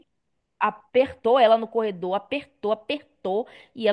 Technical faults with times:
none

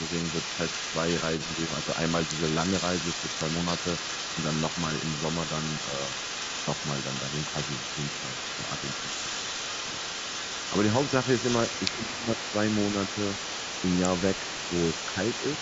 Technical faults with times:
0.00-15.62 echo leak
11.96-12.38 speech suppressed in double talk

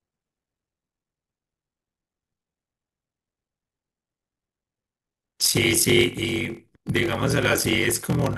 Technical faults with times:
0.00-8.38 block size mismatch (padded)

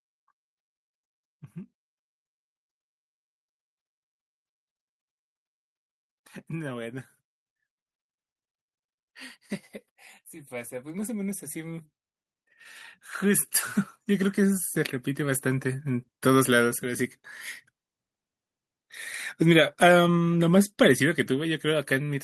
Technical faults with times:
10.49-11.92 automatic gain rising
13.19-17.11 automatic gain rising

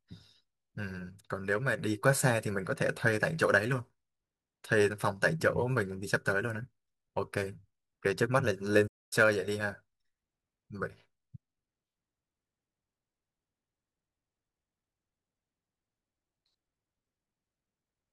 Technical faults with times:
8.87-9.13 playback stall

